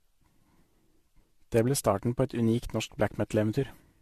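Throughout the speech, the sound is swirly, smeared and hollow, with blurred consonant onsets and nothing above 14.2 kHz. This is likely generation loss: repeated lossy re-encoding, around five passes, each requantising on a shifted frame grid, which fits 64 kbit/s AAC-LC.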